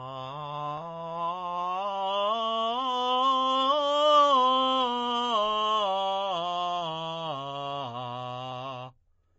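Throughout the music, nothing remains above about 7.7 kHz, and the sound turns watery and swirly. This is likely heavy MP3 compression, fitting a bitrate near 32 kbps.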